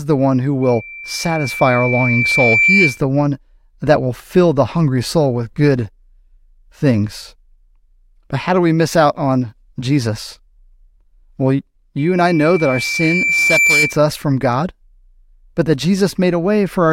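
A loudspeaker feedback squeal rises from 0.62 s to 3.01 s and returns from 11.98 s to 14.02 s. Each time a steady tone near 2.3 kHz swells, over roughly two seconds the first time and 1.5 seconds the second, ending a few decibels above the speech. The microphone is picking up its own loudspeaker, with loop gain above one at that frequency.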